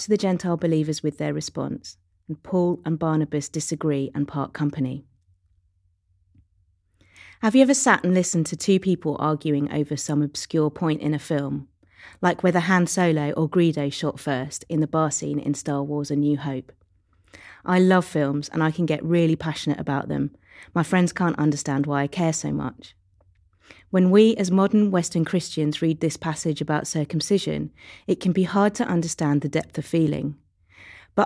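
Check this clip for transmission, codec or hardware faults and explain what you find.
No faults found anywhere in the speech.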